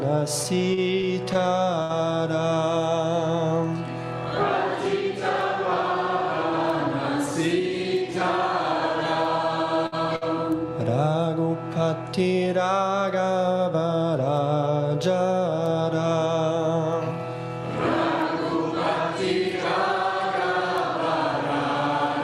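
From 0.43 to 1.92 s the audio shows repeated stalls, a stutter: five times the playback buffer ran dry and the last sound was stretched to cover the wait, about 139 ms in all, the longest gap 68 ms. Nothing is skipped; the sound simply drags and hiccups.

At 9.86 to 9.95 s and again at 10.16 to 10.24 s comes a burst of packet loss. Each time the last sound is held and faded for about 55 ms, then the audio resumes about 60 ms further on. Unlike the stutter, that stretch is gone.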